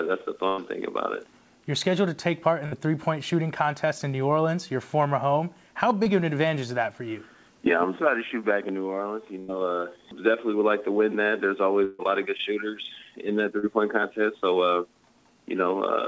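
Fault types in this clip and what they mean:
Burst of packet loss: Several packets in a row failed to arrive in time, so a stretch of the stream went missing. The receiver kept the last sound going and faded it down. You hear a held buzz or dying hiss, then the sound picks up further along. This happens at 0.48, 2.66, 9.39 and 11.84 s. Each gap lasts between 60 and 140 ms, the longest at 11.84 s.
Short concealed packet loss: A brief piece of the stream arrived too late for the decoder. The receiver filled the hole by extending the preceding sound, then blended back into the real signal. Each one is a quick smear or wobble rather than a clear gap. This occurs at 6.04 s, covering about 20 ms, and at 13.59 s, covering about 40 ms. Both stay brief, within the band-limited G.722 call audio.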